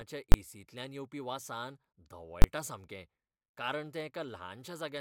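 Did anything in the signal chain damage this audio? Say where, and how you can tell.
Yes. There are two sharp, very loud bangs in the speech, at 0.32–0.34 s and 2.42–2.44 s. These are invalid numbers at full scale: a processing calculation produced infinite or invalid values, which were clamped to the extreme and held for a 20 ms block each time.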